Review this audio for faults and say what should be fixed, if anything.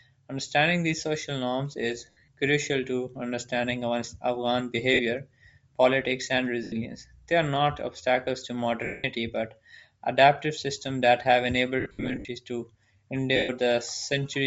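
The speech has a breathy, grainy upper band throughout, with high frequencies thinned out and replaced by a noisy texture. This is likely Bluetooth LC3 compression running at a low bitrate, and the sound fits something near 32 kbps. At that rate the encoder drops much of the upper spectrum in each 10 ms frame and fills the gaps with shaped noise. The result is plainly audible.

Lost LE Audio frames cause six dropouts, at 2.10–2.27 s, 4.94–5.01 s, 6.63–6.72 s, 8.85–9.04 s, 11.80–12.28 s and 13.36–13.50 s. The first follows "these social norms is" and is scattered over about 180 ms. The fourth sits between "are not obstacles to" and "but adaptive systems that". The fifth, after "adaptive systems that have", spreads over about 480 ms in runs of up to roughly 70 ms. In each gap the decoder repeats the last spectrum with randomised signs, so the sound turns into a noisy smear and fades toward silence on the longer losses.

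To prevent both faults, raise the LC3 bitrate and improve link robustness through a shorter radio distance, less 2.4 GHz interference, and retransmissions or a larger jitter buffer.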